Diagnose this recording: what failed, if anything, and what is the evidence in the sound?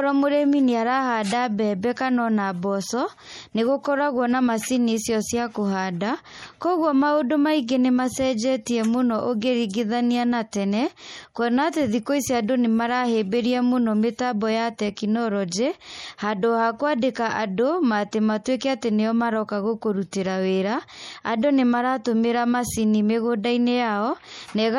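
The codec stage is at fault, and the damage runs through the whole recording. The speech has a watery, swirling quality. Sibilants sound metallic and chirpy. Consonant attacks smear. Nothing is present above 17.8 kHz, a hard ceiling typical of a perceptual encoder dropping the treble. This is likely MP3 compression at a low bitrate, consistent with roughly 48 kbps. Starved of bits, the encoder zeroes weak frequency lines that flicker between frames, and that flicker produces the swirl.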